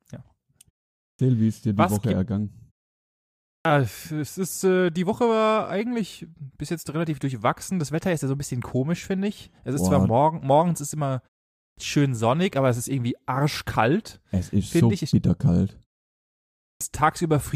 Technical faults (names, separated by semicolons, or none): clipped start after a pause